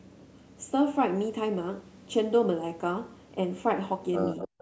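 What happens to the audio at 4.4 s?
From 4.38 s to the end, there is an echo leak. A fainter copy of the speech returns 243 ms late and roughly 10 dB down, likely loudspeaker pickup that the other side's echo canceller missed. A spectrogram shows the harmonic pattern repeated, shifted right, and the waveform shows a smaller trailing duplicate.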